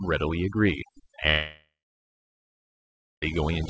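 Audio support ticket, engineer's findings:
Speech over a near-silent background with twinkling specks, throughout. Overdone noise removal: bands near the noise estimate are pulled down, taking quiet speech detail with them.

1.30 s to 3.24 s: last sound held as a fading buzz or hiss, then about 1.5 s of silence. Audio resumes with roughly 1.9 s lost. Likely a long network dropout masked by receiver concealment, over a G.722-style path with nothing above 8 kHz.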